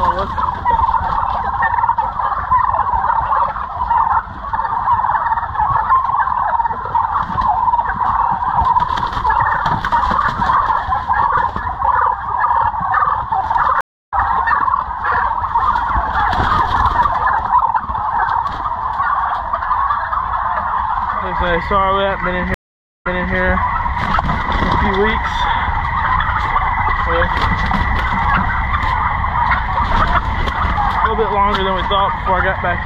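Stream reconnects occur at 13.81 s and 22.54 s, where the connection dropped and the player restarted its decoder. The first gap of 298 ms resumes about a fifth of a second later; the second, 495 ms, resumes 313 ms earlier, repeating resent material.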